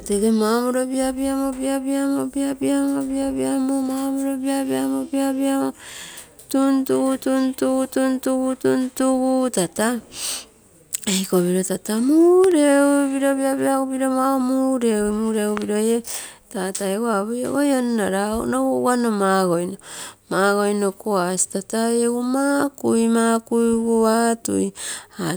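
A likely voltage spike, from a plug, switch or static, jumps the signal as a loud pop, a double one, about 15 dB above the speech, at 12.44–12.54 s and 15.57–15.64 s.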